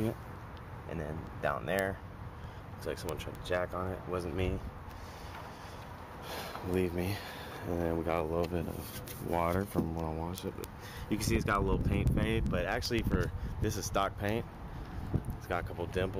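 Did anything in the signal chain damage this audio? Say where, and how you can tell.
Yes. Word clock ticks on the digital link: sharp ticks about every 0.15 s from 0.23 to 16.11 s, as an unlocked receiver clock slips single samples.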